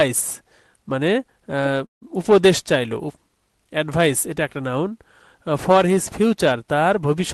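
At 1.85 s a call audio freeze occurs, likely from packets stalling so the jitter buffer ran dry; the sound smears into a fading tail, then near-silence for about 140 ms, and resumes at 2.04 s without losing anything, just running later, through the band-limited call path.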